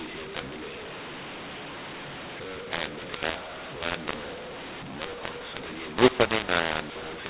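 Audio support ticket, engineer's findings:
mu-law and A-law mixed up, full clip, 0 to 7.3 s: harsh, gritty speech; pauses filled with hiss. Component: G.711 decoder. A-law stream expanded with the mu-law table, so levels scramble and near-silent samples jump well above zero. Waveform shows jagged, uneven peaks and a fuzzy noise floor where gaps should be flat. Spectrogram shows broadband noise up to the 4 kHz telephone ceiling, with no clean gaps between phrases.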